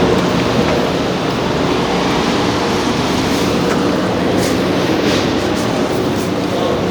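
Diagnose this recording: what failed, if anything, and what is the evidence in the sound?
Nothing failed; no fault is audible in this recording.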